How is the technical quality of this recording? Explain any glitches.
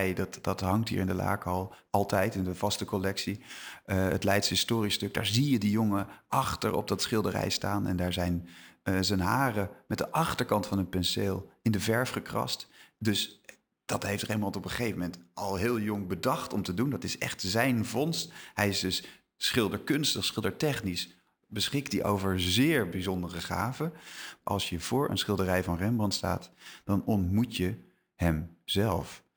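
Not great: there's a constant bright, metallic fizz riding on the speech from start to finish. That's imaging from sample-and-hold upsampling. Each sample was simply repeated, with no smoothing, which points to a 24 kHz original raised to 48 kHz. A mirrored copy of the speech spectrum lands between 12 and 24 kHz, about 20 dB down, tracking the voice's level.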